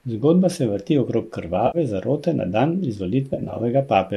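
Between 1.67 and 1.78 s, after "se vrti okrog" and before "zarote na dan", the speech smears into a brief noisy, phasey patch lasting about 70 ms. This is AAC frame loss with concealment: the decoder rebuilds the missing stretch from the last good spectrum rather than going silent. From 3.34 to 3.60 s, after "zarote na dan", the same smeared, noisy texture returns in broken flickers. About 120 ms of audio is missing, scattered over 260 ms, and the longest single gap is around 40 ms. Underneath, a faint graininess is likely from light low-delay AAC compression, consistent with AAC-ELD at about 64 kbps.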